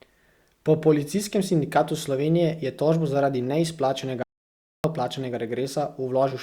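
Speech, with one audio dropout to silence from 4.23 s to 4.84 s. For about 0.61 s the signal falls to silence: the talker is cut off mid-flow, the room tone vanishes along with it, and whatever was said in that span is lost. The abrupt cut and the total absence of background noise point to the input being lost while the recorder kept writing silence, most likely a momentary disconnect, link failure or accidental mute.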